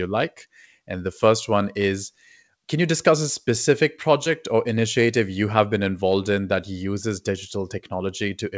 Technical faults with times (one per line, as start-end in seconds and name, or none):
4.24-4.27 short concealed packet loss